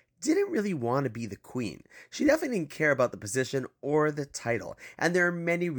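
No technical fault can be heard anywhere in this speech recording, and the signal holds steady without any audible disturbance.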